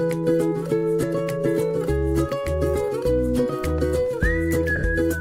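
At 1.02 s there's a brief blip of lost LE Audio frames, about 10 ms, which fits a single dropped LC3 frame. The decoder papers over the gap by replaying the last spectrum with scrambled signs, so you hear a quick noisy smear instead of a hole. Around 4.76 to 4.84 s it's worse: roughly 60 ms goes missing, scattered across 80 ms, with the longest run around 50 ms. That longer gap turns into a grainy wash that fades as concealment runs on.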